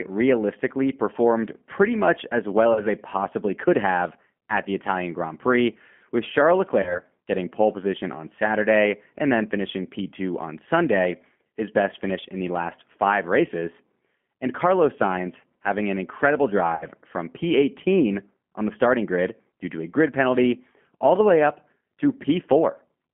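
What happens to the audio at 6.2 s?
At 6.2 s the speech carries G.729 codec damage, present through the whole clip. The coder rebuilds each 10 ms frame from a vocal tract filter, pitch predictor and a few pulses, consistent with 8 kbit/s, leaving band-limited, rough, synthetic-sounding speech confined to about 150 Hz to 3.4 kHz.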